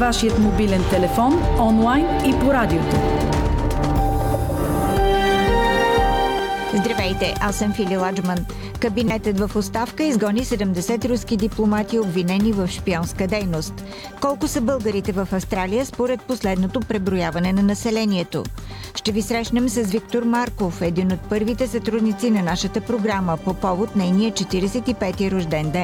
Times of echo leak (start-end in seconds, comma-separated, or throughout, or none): none